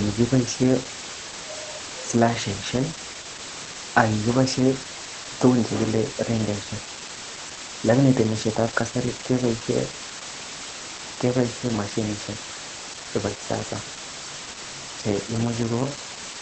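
From start to finish the speech sits under a loud, even hiss. That's low bit depth with dither: the signal has been squeezed onto so few levels (the noise floor suggests around 5 bits) that rounding error becomes a big deal. Dither randomises that error before rounding, so instead of gritty distortion you hear steady white noise, only about 10 dB below the speech. It doesn't pump or change with the talker.

Also running the whole way through is Opus voice compression, and the damage is plainly audible. The codec seems to be working in its SILK speech mode at a low rate, something like 12 kbps, so the excitation gets coded coarsely. That gives the voice a muffled, slightly hoarse, faintly robotic character. The band is trimmed to wideband, with nothing above 8.5 kHz, which dulls the top end.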